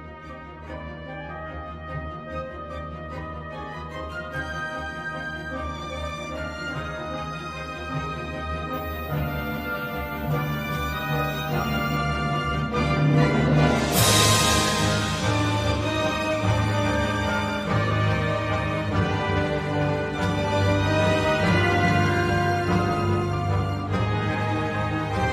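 From 8.73 s to 11.97 s a thin, high whistle sits above the audio, wavering within a narrow band between about 14.61 kHz and 14.73 kHz, roughly 25 dB below the signal. This is switching supply whistle: a switching power supply in the chain is running in an audible burst mode or beating with another supply, and its pitch wanders slightly as the load it is feeding shifts.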